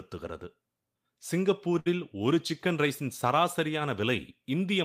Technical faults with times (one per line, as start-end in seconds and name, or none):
1.79-1.88 short stall from a late packet